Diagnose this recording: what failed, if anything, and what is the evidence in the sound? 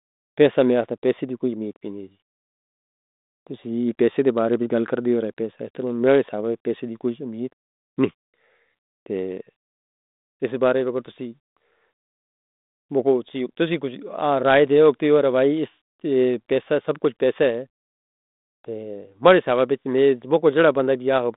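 Nothing has failed here: the speech comes over a 32 kbit/s G.726 ADPCM telephone path doing its ordinary job, with the band sitting between about 200 Hz and 3.7 kHz, nothing above 3.8 kHz, and just the light coding roughness you'd expect at that rate.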